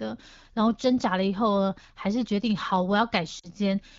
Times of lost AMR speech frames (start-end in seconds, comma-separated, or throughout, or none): 3.39-3.49